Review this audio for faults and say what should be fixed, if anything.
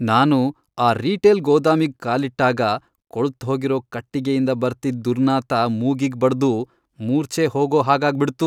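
Nothing stood out on listening, so there is nothing here that needs fixing.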